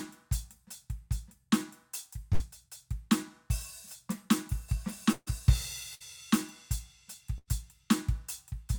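At 2.33, 5.12, 5.95 and 7.38 s the music smears into a held, fading tone, then jumps ahead. The longest, at 5.12 s, briefly goes silent. Each is a burst of packet loss: the receiver stretched the last sound over 60 to 140 ms of missing audio.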